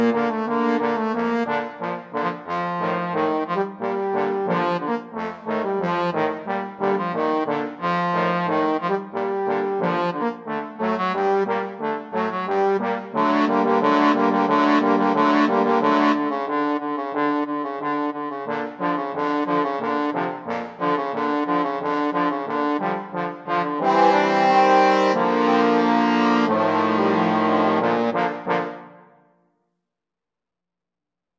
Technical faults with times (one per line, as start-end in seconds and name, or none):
none